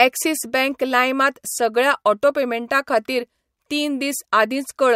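No faults turn up anywhere in this recording; the speech runs along without a single glitch, dropout or disturbance worth pointing out.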